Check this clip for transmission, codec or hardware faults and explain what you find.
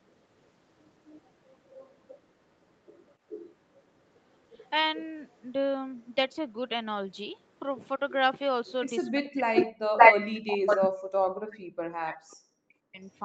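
Two kinds of fault are present, both pointing to echo-canceller trouble on a loudspeaker-based call.

Echo leak: delayed copies of the speech at 0.07–0.5 s (276 ms behind, about 40 dB down), 1.07–5.42 s (436 ms, about 20 dB down), 7.39–7.59 s (436 ms, about 40 dB down), and 9.24–9.66, 9.98–10.29 and 10.66–10.89 s (565 ms, about 5, 15 and 5 dB above the speech). The likely cause is residual echo the canceller failed to remove. On a spectrogram these appear as faint repeated harmonic traces that become bright ghost copies near 10 s.

Speech suppressed in double talk: from 9.1 to 13.04 s, around 3 s in total, the speech ducks in pieces, in places by roughly 40 dB. This likely happens because the suppressor confuses overlapping talk with echo. In the waveform the envelope collapses into sudden gaps.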